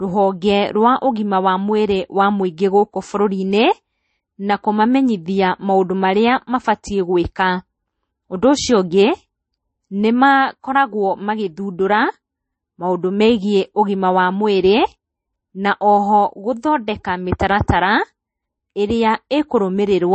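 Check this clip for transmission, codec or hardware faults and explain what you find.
One codec fault runs through the whole speech clip: transcoding between lossy codecs. The likely cause is speech encoded first with Vorbis and then re-encoded to low-rate MP3, around 32 kbit/s. The second encoder spends its scarce bits on the first encoder's artefacts. Nothing survives above 8.3 kHz, so the speech sounds dull and smeared, with two kinds of swirly, watery coding noise layered together.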